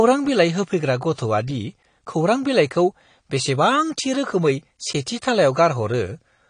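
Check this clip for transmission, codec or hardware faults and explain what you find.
AAC compression damage runs through the whole speech clip. Nothing sounds above 10 kHz, and the speech is dull and smeared, with a warbling, fizzy texture on sibilants. The likely cause is AAC-LC coding at a low bitrate, consistent with about 32 kbps, lowering the cut-off and coarsely quantising frequency bands.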